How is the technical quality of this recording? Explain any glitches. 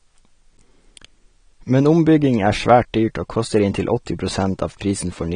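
Quality is limited by lossy compression throughout the speech. The whole clip sounds dull and smeared, likely from low-bitrate AAC compression: content stops at 9.7 kHz, and coarse quantisation leaves sibilants fizzy and warbling, consistent with roughly 32 kbps.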